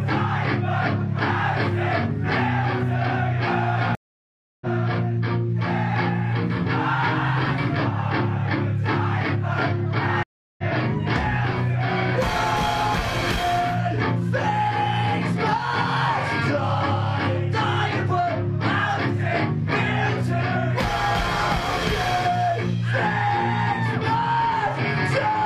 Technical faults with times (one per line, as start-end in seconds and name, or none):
3.95-4.66 stream reconnect
10.23-10.63 stream reconnect